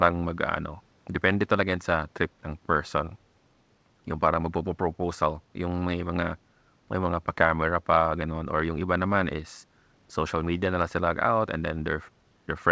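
No technical faults are audible.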